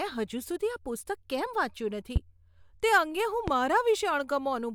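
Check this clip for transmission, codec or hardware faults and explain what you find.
Two loud pops cut through the speech, at 2.16 to 2.19 s and at 3.48 to 3.51 s. Each is a single sharp pulse, well above the level of the speech, which carries on beneath it. The likely cause is a sudden voltage step from a plug, switch, static discharge or driver glitch.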